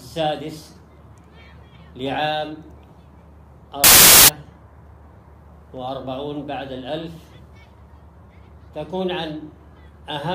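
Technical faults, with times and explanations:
3.84 to 4.28 s, wrong sample width: for just under half a second, audio stored as packed 24-bit integers was read back as 32-bit integers, so each read value straddles parts of two real samples and only some still carry the true high-order bits. The result is a burst of loud, harsh noise with the original sound faintly buried inside, running about 1.33 times too fast, which raises its pitch by the same ratio.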